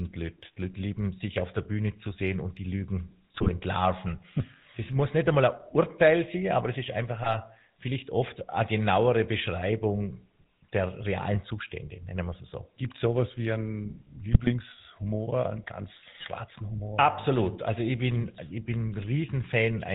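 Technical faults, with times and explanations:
Throughout: GSM full-rate codec. The speech has that buzzy, gravelly GSM edge and nothing above 4 kHz. The codec rebuilds the voice from a vocal-tract filter fed by sparse, regularly spaced pulses, so the fine texture is lost, which fits a 13 kbps stream.
3.34–3.49 s, 7.24–7.36 s (between "aber es ist einfach" and "vielleicht oft eine genauere"), 12.32–12.36 s (after "nennen wir"), 14.33–14.53 s, 16.20–16.29 s (after "einen ganz"): GSM bit errors. Short squawky, gargling bursts where corrupted filter, pitch or gain values warp the spectrum or level for a few frames.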